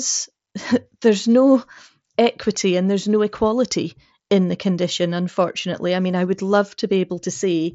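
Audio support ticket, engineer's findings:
Nothing stood out on listening; the speech sounds as expected for a Bluetooth mSBC headset link, with content stopping around 7.7 kHz.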